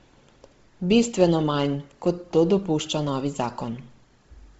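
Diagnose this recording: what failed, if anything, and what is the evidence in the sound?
Codec stage, likely Bluetooth LC3 compression near 24 kbps: throughout, the speech stops at 7.8 kHz, and noise-filled upper bands give it a heavy, grainy edge.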